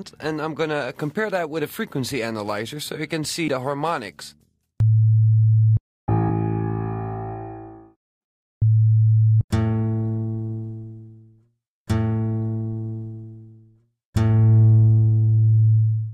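Brief glitches at 3.47, 6.28 and 9.31 s, where the audio jumps ahead by roughly 150, 150 and 200 ms: compressed frames skipped, never decoded.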